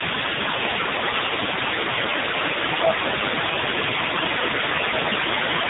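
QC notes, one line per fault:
Throughout, tandem speech coding: the voice is rough, muffled and a bit warbly, with nothing above 3.8 kHz. It sounds like two speech coders in a row ending on a low-rate AMR-NB, each one re-encoding the previous one's already degraded output.
Throughout, other side's voice leaking through: a second voice sits under the talker the whole way, only about 5 dB down. The likely cause is the far end playing on a loudspeaker, with the echo canceller leaving a lot of it in the mic.
1.93–2.24 s, 2.77–3.61 s, 3.87–4.65 s and 4.88–5.18 s, speech suppressed in double talk: the talker ducks by roughly 10 dB in each stretch, shallower (around 5 dB) at 3.87–4.65 s. This likely comes from the echo canceller pulling everything down while both sides overlap.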